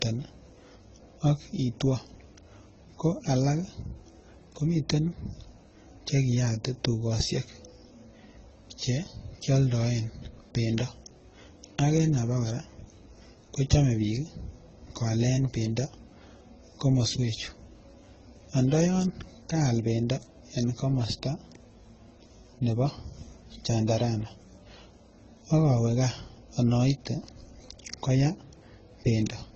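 From start to finish the speech carries layered codec damage that most likely comes from transcoding between lossy codecs, with nothing above 8.1 kHz. Artefacts from a low-rate AAC-type encode sit under a second set of artefacts, which points to a later Opus encode at a modest rate re-coding those earlier flaws. A single low-bitrate codec gives one consistent artefact character. Here two distinct kinds are heard together.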